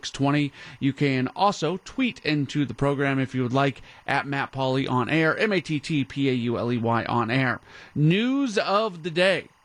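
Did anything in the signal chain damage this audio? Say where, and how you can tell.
Yes: timecode bleed in the analogue wiring. Linear timecode at 24 frames/s leaks in from an adjacent track or cable, adding a faint chirping warble near 1 and 2 kHz throughout the speech.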